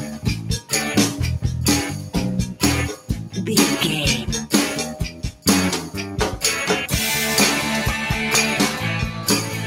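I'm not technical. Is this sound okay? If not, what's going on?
No. The whole clip pumps and thins out, because a noise suppressor applied to music or sounds keeps mistaking steady parts for background noise and turning them down. You can hear it as sound cut by the noise suppressor: held or fading parts briefly sink around 0 to 0.72, 1.91 to 2.15, 2.46 to 2.62, 2.97 to 3.37, 5.09 to 5.46 and 9.11 to 9.66 seconds.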